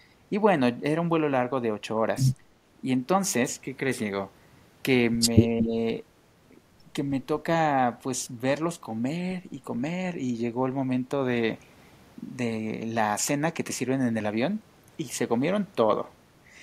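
From 5.48 to 5.72 s the speech drops by around 10 dB, with speech suppressed in double talk as the likely cause: the echo canceller turned down its own talker along with the loudspeaker echo during overlap. Between 5.6 and 5.65 s an echo leak adds a copy delayed by 228 ms, only slightly quieter than the speech, likely residual loudspeaker pickup passed back.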